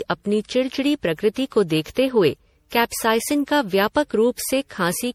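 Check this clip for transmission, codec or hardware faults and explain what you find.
There's one fault, and it runs through the whole speech clip. Generation loss: likely repeated MP3 re-encoding, around seven passes at what sounds like 64 kbit/s, leaving a swirly, hollow, smeared sound with blurred attacks.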